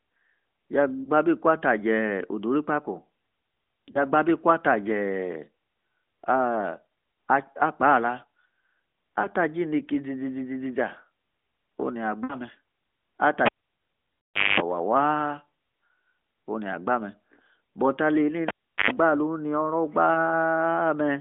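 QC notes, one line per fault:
1.04, 3.92, 6.89, 9.22, 12.24–12.36, 14.34, 20.14 s: lost AMR speech frames. Brief dips and warbles at 1.04 s, just before "gbaa abi" at 3.92 s, at 6.89 s, 9.22 s, and just after "ini oro" at 20.14 s. The 60 ms run at 12.24 s and the 140 ms run at 14.34 s sound drawn out and fade toward silence. Corrupted frames were discarded, and the decoder repeated the last good pitch and spectral settings at falling gain.
13.46–14.60, 18.48–18.91 s: cable pulled and plugged in. There is a pop, then near silence, then a 50 Hz mains buzz, then a second pop as the sound returns. The first gap lasts about 1.1 s, with roughly a quarter-second of buzz. The second comes after "but alie", with a 375 ms gap and about 100 ms of buzz. A live lead was yanked out, its tip touched the socket briefly on reinsertion, and the connection then reseated, all heard through the narrowband 200 Hz to 3.5 kHz line.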